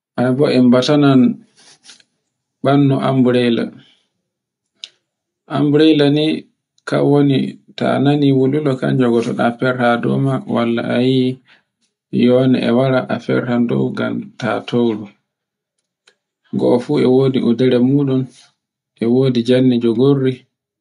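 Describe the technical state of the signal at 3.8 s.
At 3.8 s the speech signal is intact, with no dropout, clipping, distortion or other audible fault.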